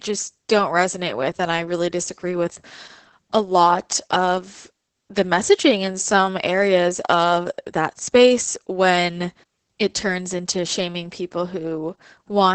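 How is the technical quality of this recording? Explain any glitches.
The speech is degraded from start to finish by heavy Opus voice compression. The encoder appears to be running in its SILK linear-prediction mode, coding the excitation very coarsely, which fits a bitrate of around 10 kbps. The band is cut to wideband, with nothing above 8.5 kHz, so sibilants lose their edge and the speech sounds muffled. The starved excitation makes the speech hoarse and slightly robotic.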